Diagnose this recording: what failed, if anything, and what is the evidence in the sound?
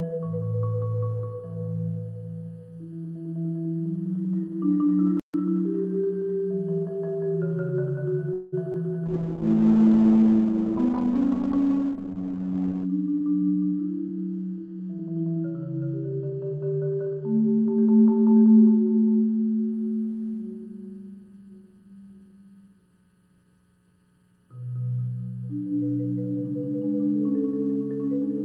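Channel delay (comb filtering) at the mixdown or playback stage: one channel lags the other by just under a millisecond before the two are summed to mono. Throughout the clip, cancellation cuts fixed notches starting around 700 Hz and recurring about every 1.4 kHz, leaving a hollow, phasey colouring.

Playback stall, most likely a player that ran out of data or had its output thread blocked: output goes silent from 5.20 to 5.34 s, about 143 ms. The sound halts mid-flow, then resumes where it stopped.

Call audio freeze in the network path: packets were likely held up and the jitter buffer ran dry. From 8.33 to 8.54 s the receiver stretches the last sound for 190 ms as a fading buzz or hiss without dropping to silence. The audio then continues intact, 190 ms later.

Short concealed packet loss on the network: 20 ms of audio never reached the decoder. Between 8.72 and 8.76 s the receiver bridges the hole with 13 ms of continued sound and crossfades back. 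The result is a brief smear or wobble where material is lost.

Call bitrate drop in the codec, driven by a falling bandwidth estimate: between 9.06 and 19.78 s the encoder falls from 32 to 7 kbps, with bandwidth narrowing from 20 kHz to 8 kHz. The sound turns rough, watery and muffled, worst for about 3.8 s at the lowest rate.

Jitter buffer speed-up in call processing: the buffer had overfilled and the receiver trimmed pitch-period slices to shed about a fifth of a second. From 12.67 to 14.19 s playback runs at 111% speed, unchanged in pitch, so it sounds hurried.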